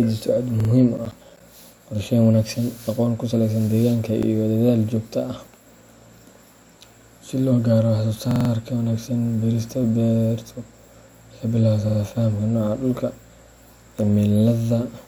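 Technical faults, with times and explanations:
0.60–0.70 s, 4.23–4.27 s (just after "aqoon ku saleysan deegaanka"), 8.31–8.50 s and 11.89–11.98 s: repeated buffer. A piece of about 46 ms, which fits a 2048-sample buffer, plays again two, one, four and two extra times with hard joins, so the speech stutters briefly.
0.97–1.40 s: processor overload crackle. The processor missed about ten deadlines in a row on buffers of roughly 10 ms, and each miss left a short hard-edged silent gap, so a gritty tearing crackle rides on the speech until the load passes.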